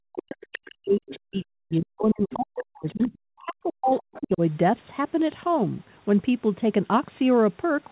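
From 0.02 to 4.42 s the speech is suppressed in double talk. The talker's level dips repeatedly, at its deepest by roughly 40 dB, across about four seconds, most likely because the echo canceller could not separate the talker from loudspeaker echo and attenuated both.

Within that stretch, the other side's voice leaks through at 0.42–0.58, 1.08–1.2, 2.31–2.35, 2.57–2.64, 2.87–3.07 and 3.9–4.22 s as brief scraps, mostly well below the talker, around 10 to 30 dB down. The likely cause is residual loudspeaker echo the canceller left in the microphone signal. All of it is narrowband, nothing above 4 kHz, as the G.711 call path carries it.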